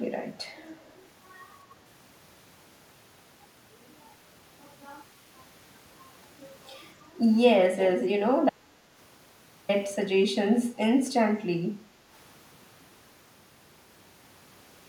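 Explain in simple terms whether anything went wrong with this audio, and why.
Echo leak, at 0.78 to 0.93 s and again at 7.79 to 7.9 s: a delayed copy of the speech returns 278 ms late, barely audible the first time and much louder the second. The likely cause is a loudspeaker on the far end whose echo canceller let some sound slip back into the microphone.

Audio dropout to silence, from 8.50 to 9.69 s: the speech stops and about 1.19 s of total silence follows, with no background sound at all. The likely cause is a brief loss of the input, such as a link failure or a mute, while recording continued.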